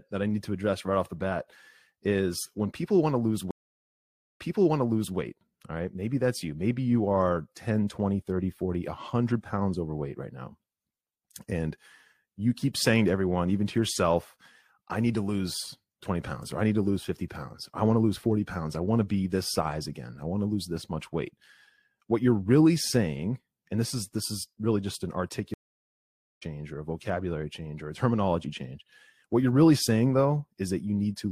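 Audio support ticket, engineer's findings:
Stream reconnect, 3.51–5.17 s: after "people want to lose", 0.88 s dropout, then 0.79 s of audio repeats; server burst resend into fresh decoder. Stream reconnect, 25.54–26.43 s: after "is really just an", 0.88 s silence, resumes about 0.4 s ahead at "or a vocabulary change"; live-edge rejoin.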